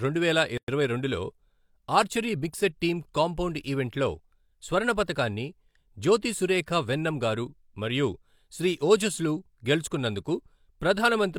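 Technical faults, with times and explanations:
0.58–0.68 s, gap at a join of encoded pieces: the speech drops into about 107 ms of silence, left by encoder start delay and last-frame padding that were never trimmed, then resumes where it stopped.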